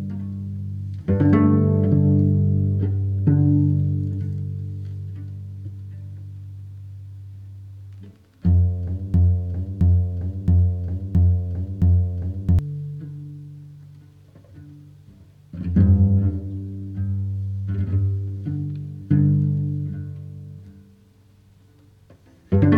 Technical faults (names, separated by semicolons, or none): broken-record loop